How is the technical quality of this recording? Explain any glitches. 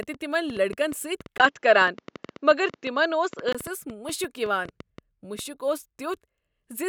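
The recording has two clear technical faults, both in the first five and a half seconds of the speech.

A train of clicks runs from 0.03 s to 5.40 s, about 6.7 per second at an uneven pace, some forty in total, with peaks about 5 dB above the speech. The repeated pulses of similar shape likely come from electrical interference or a faulty connection or power supply, and they tick audibly through both speech and pauses.

From 1.38 s to 3.55 s the input switched to a poorer device. Nothing above 7.6 kHz gets through, so the speech turns dull and boxy, with a brief silence of about 20 ms at the changeover, a level shift of roughly 5 dB, and a faint noise floor around 55 dB down. The cause is likely the system changing microphones mid-recording before reverting.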